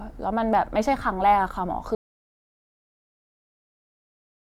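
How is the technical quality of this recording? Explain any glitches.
The recording has one clear fault that spoils its second half. An audio dropout to silence begins at 1.95 s and continues to the end of the clip. The input signal was likely lost, with recording carrying on as silence. The speech stops abruptly mid-flow, leaving dead silence with no room tone, and anything said afterwards is missing.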